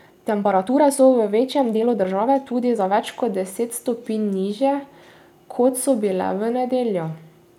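Right from the start, 0.0 to 3.04 s, there's a time-stretched section. The speech runs at about 1.45 times its natural pace while the pitch stays put, so it comes across rushed. At 3.04 s the pace snaps back to normal. That's most likely software squeezing this stretch to fit a shorter slot, cutting tiny pieces out rather than pitching it up.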